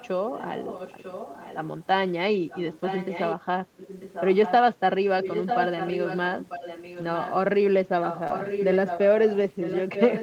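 From the start to 1.58 s, and again at 2.5–3.36 s, 3.77–4.52 s, 5.21–7.34 s and 8.02–10.22 s, a copy of the speech trails it by about 0.94 s. This is echo leak, likely from a loudspeaker whose echo canceller let the far end's sound back through. The copy starts well below the speech and grows much stronger later.

At 6.93–7.03 s, 60 ms sounds rougher and noisier. This is a lost packet rebuilt from error correction. The length points to three separate packets lost, each recovered from a low-bitrate copy carried in the next packet.

At 8.27–8.32 s there is a brief smear. This is short concealed packet loss. About 20 ms never arrived in time, so the decoder stretched the preceding sound to fill it. Within that stretch, at 8.30 s, a further 20 ms was rebuilt from error correction.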